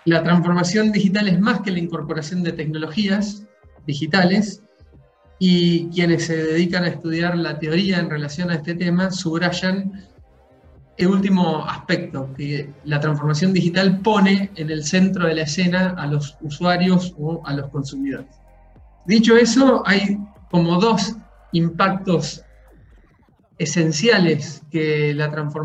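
Right at 11.01 s there's a classic CD skip: a brief tick with a near-silent gap of just a few milliseconds, and then the audio carries on from a different point rather than where it left off. That's the laser being knocked or tripped by a flaw and landing on another turn of the disc's spiral, so the player drops out for an instant and resumes from the wrong track position.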